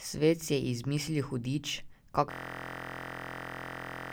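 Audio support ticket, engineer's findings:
Speech cuts out at 2.31 s into a steady buzz near 43 Hz that runs to the end of the clip. A 23.22 ms slice of audio repeats exactly, dozens of times. Probable component: audio driver or host system. Mechanism: a system hang loop. The system froze while the sound hardware kept replaying the same ring buffer. The loop length fits a 1024-sample buffer. The short period makes the repeats fuse into a buzz rather than a stutter.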